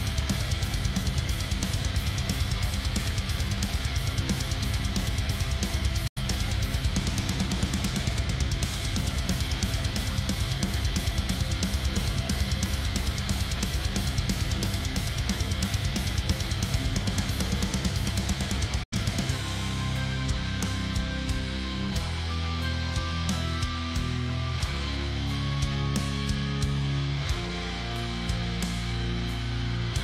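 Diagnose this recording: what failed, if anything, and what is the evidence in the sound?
The sound fades out within about 8 ms and falls silent twice, 6.07 to 6.22 s and 18.83 to 18.97 s, then resumes further on. This is a digital broadcast dropout at reception. The receiver muted over corrupted frames, a hole that fits two lost frames, and that audio is gone.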